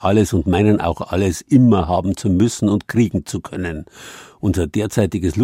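Nothing in this short speech recording points to a technical fault: the signal stays steady and continuous, with no audible defect at any point.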